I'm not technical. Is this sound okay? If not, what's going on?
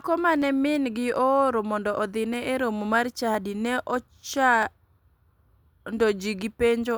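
No. You'll hear four sharp little clicks in the speech, at 0.42, 2.34 (just before "e romo mar"), 3.35 (just after "e romo mar") and 4.63 seconds. These are likely dropped samples: a tiny sliver of audio, far under a millisecond, went missing, so the sound jumps abruptly.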